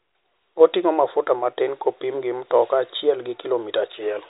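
Speech recording with no audible technical faults.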